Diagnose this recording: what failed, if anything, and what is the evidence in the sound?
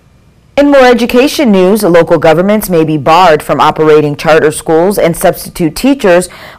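A harsh fuzz sits on every loud syllable throughout the speech: hard clipping, with peaks driven about 12 dB past a stage's limit and flattened, roughly a tenth of samples cut.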